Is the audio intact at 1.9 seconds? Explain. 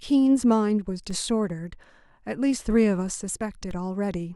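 No. At 1.9 s the sound sits inside a DC step from 1.11 to 3.71 s. The waveform's zero line has jumped by about -30 dBFS. On a waveform the trace rides off-centre. On a spectrogram a brief low-frequency smear marks the step, heard as a low thump.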